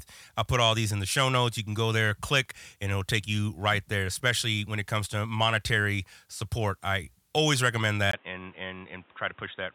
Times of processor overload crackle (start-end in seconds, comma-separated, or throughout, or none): none